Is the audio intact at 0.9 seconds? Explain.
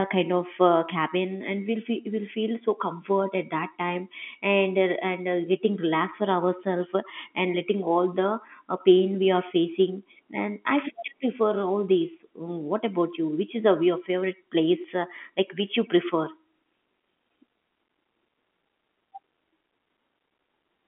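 Yes, the speech is intact at 0.9 seconds, with nothing wrong beyond the narrow telephone band of G.711 telephone coding, which cuts off everything above about 3.8 kHz.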